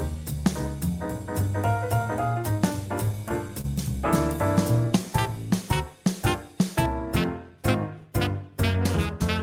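The audio has two timing faults. Repeated stalls (stutter) run from 3.05 to 3.66 s: packets arrived late, the jitter buffer emptied five times, and the receiver extended the preceding sound to cover about 66 ms, with the longest gap 29 ms. Nothing is lost, but the passage drags and judders. A jitter buffer slow-down follows from 4.85 to 5.34 s: the receiver rebuilt its reserve by repeating short stretches, adding 50 ms and playing at 92% speed with unchanged pitch, so the sound is audibly drawn out.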